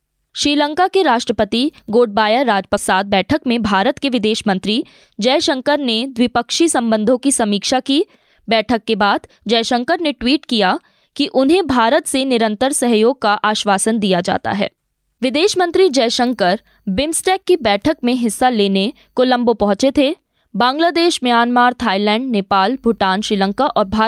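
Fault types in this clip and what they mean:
Skip ahead: At 2.77 s playback jumps forward, dropping about 0.4 s of speech with no gap filled. On a waveform the two sides butt together with no silence. A spectrogram shows harmonics and formants changing abruptly at one vertical seam.
Jitter buffer speed-up: From 2.93 to 4.55 s the receiver trimmed many short pitch-period pieces to shrink an overfull buffer. About a tenth of a second was removed, so speech runs roughly 7% fast at unchanged pitch. Spectrogram harmonics stay level while syllables look compressed in time.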